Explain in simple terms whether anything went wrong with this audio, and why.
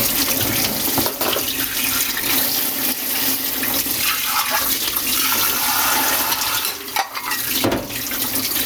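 Something did go wrong, throughout the whole clip. You can hear gain pumping. Loud and soft parts end up closer in level, and the sound is squashed. The level swings a lot. This was likely caused by the recording level being set far too high, with a fast limiter yanking it back down.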